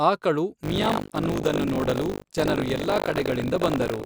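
Buffer tearing runs from 0.62 s to the end of the speech: the writer and reader of the audio ring buffer have slipped, so about a fifth of each period replays audio roughly 70 ms old, joined hard, giving a steady robotic 50 Hz rattle, consistent with a 20 ms period.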